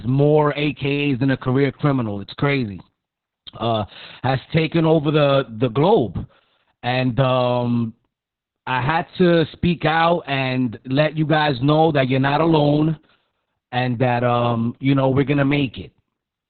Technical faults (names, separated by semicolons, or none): Opus voice compression